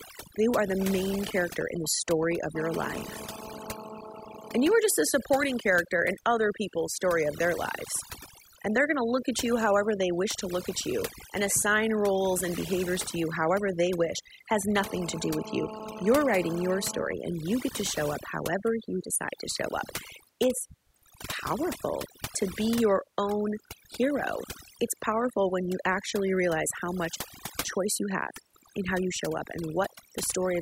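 Overdone noise removal runs through the whole recording. The noise reduction was set too hard. It drops single frequency bands whenever they sit near its noise estimate, taking quiet parts of the speech with them. Pauses fall to near silence with twinkling specks.

GSM phone buzz appears from 2.56 to 4.75 s and again from 14.79 to 17.08 s. A nearby 2G phone in a call sends radio bursts 217 times a second, and the audio circuit rectifies them. The result is a hard, raspy 217 Hz buzz full of harmonics. It sits about 12 dB below the speech and ignores it.

GSM signalling bursts follow at once, from 17.1 to 20.0 s. The phone is still in the call, but its user has gone silent, so it transmits only short groups of bursts. These rectify into even ticks with a longer 217 Hz buzz twice a second, roughly 20 dB below the speech.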